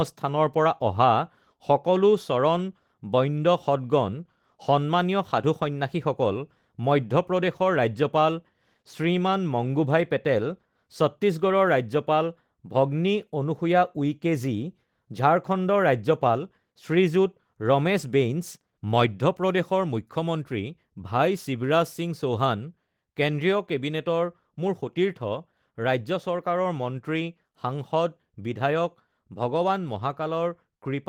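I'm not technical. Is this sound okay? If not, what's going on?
Yes, this sound is okay, and there's nothing going on that needs fixing.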